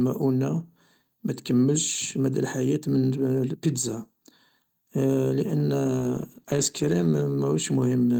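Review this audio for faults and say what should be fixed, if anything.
A call bitrate drop runs from 5.84 to 7.67 s. The speech turns coarse and watery, and the top end dulls. The encoder was given far fewer bits, which fits a fall from 32 to 15 kbps, held at the lowest rate for about 1 s. Prevent it by reserving steadier bandwidth for the call.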